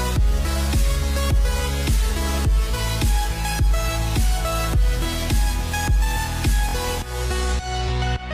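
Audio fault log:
6.69–6.75 s, Bluetooth stutter. A short slice of sound repeats rapidly, giving a brief buzzing stutter. Packets arrived late or were lost, so the receiver replayed its last buffer. Playback then resumes about 46 ms further on, which fits two lost packets.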